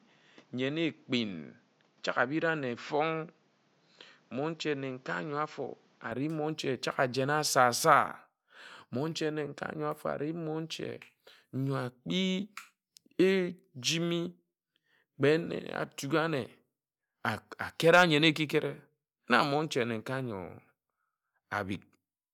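Speech that opens dull and boxy for its first 6.12 seconds, then clears with no gap at 6.12 s. This points to the input switched to a poorer device at the start, likely a narrower-band microphone or headset profile, before changing back. On a spectrogram, nothing appears above 7.6 kHz until 6.12 s, with a faint noise floor roughly 35 dB under the speech. The waveform is visibly smaller during that stretch, sitting about 5 dB lower before jumping up.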